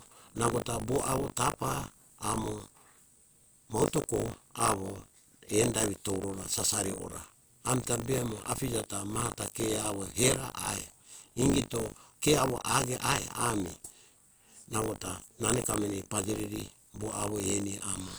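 Buffer tearing runs throughout the speech: writer and reader overlap within each period, splicing in a small slice of audio about 40 ms old, producing a 50 Hz robotic buzz.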